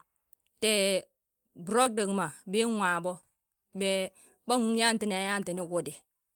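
At 1.83 to 1.87 s, a short concealed packet loss occurs: about 20 ms of the speech failed to arrive at the decoder in time, and the receiver patched roughly 19 ms of the gap by extending the preceding sound, carrying its pitch forward if voiced or synthesising shaped noise if not, before crossfading into the real signal again. The result is a brief smear or wobble in the speech, and a short consonant there may disappear.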